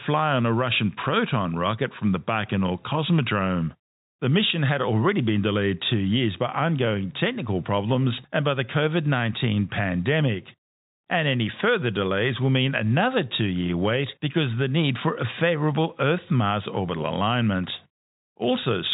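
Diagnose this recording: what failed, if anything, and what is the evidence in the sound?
Nothing in this speech recording points to a failure: the band stops at about 3.8 kHz, with only faint codec texture, consistent with ordinary G.711 telephone coding at 64 kbps working as intended.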